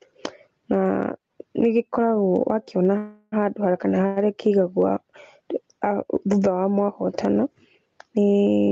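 Gain pumping runs through the whole clip. The gain swings by about 15 dB. Loud and soft passages sit close in level, and the speech sounds squashed. The likely cause is input gain set far too high, with a fast limiter clamping it down.

At 2.97 s a call audio freeze begins. Until 3.34 s, the last sound is stretched into a fading buzz or hiss. Then the speech resumes where it stopped, about 347 ms late, with nothing lost. A shorter freeze from 4.06 to 4.18 s adds a 102 ms gap. The likely cause is delayed packets emptying the jitter buffer. Through both, the band stays capped near 8 kHz.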